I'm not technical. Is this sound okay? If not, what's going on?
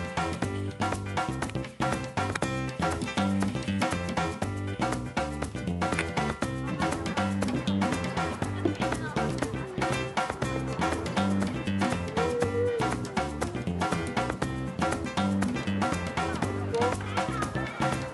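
Yes, this sound is okay, with nothing going wrong anywhere in it. Nothing here needs fixing, so you can listen to it as it is.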